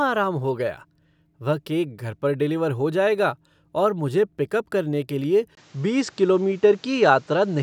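Speech in which the input was likely switched to a poorer device at 5.55 s: after a 20 ms silence, the sound turns dull with nothing above 8.2 kHz, shifts about 5 dB in level, and gains fresh background noise roughly 35 dB down until the end.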